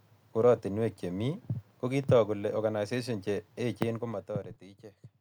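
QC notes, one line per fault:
3.90–4.64 s, zipper noise: the level drops by about 15 dB in hard 3 dB steps, around seven per second, with no smoothing between them, so each jump puts a small click into the speech, heard as a fast ticking riding on the fade.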